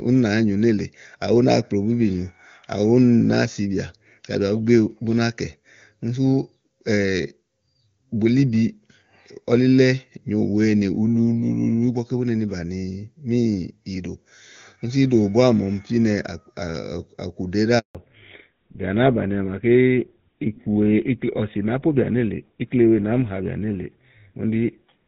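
At 17.79 s a handover gap silences the speech for 160 ms. No frames arrived while the call switched networks, so the sound drops out until 17.95 s.

From 17.95 s onward, fallback to narrowband removes everything above 4 kHz. The clearer HD Voice sound turns duller and rougher, consistent with GSM full-rate coding.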